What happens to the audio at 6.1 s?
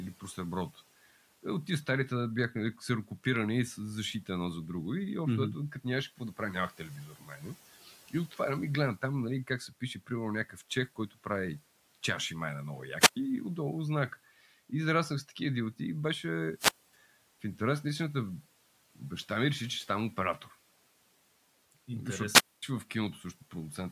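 Nothing goes wrong at 6.1 s; the speech carries on intact, with only the room's own background noise sitting about 26 dB beneath it.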